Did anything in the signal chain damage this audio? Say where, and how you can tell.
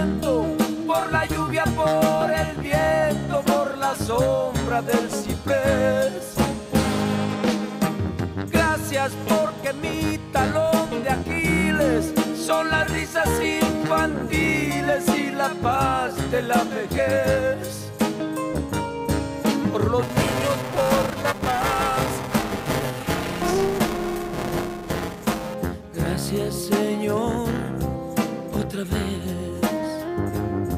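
Yes. At the driver or buffer stage, buffer tearing runs from 20.02 to 25.54 s: a rattling 375 Hz buzz, which fits a 128-sample buffer, where roughly a third of each period replays audio about 5 ms old. Unlike isolated dropout clicks, it is continuous and present only with signal.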